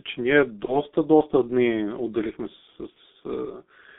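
The whole speech recording carries G.723.1 codec damage. The band runs only from about 200 Hz to 3.6 kHz. Heavy coding, which fits a 6.3 kbit/s rate, makes the speech muffled and hoarse. Consonants blur because the coarse 30 ms frames smear them.

VoIP packet loss concealed by the speech codec first appears from 0.65 to 0.77 s, after "че ние" and before "доста дни отделихме с". About 30 ms went missing. The decoder stretched the last sound into a buzzy tone or coloured noise that fades, and speech stays weak briefly afterwards. The same fault returns from 2.90 to 2.98 s, after "доста дни отделихме с", covering about 60 ms.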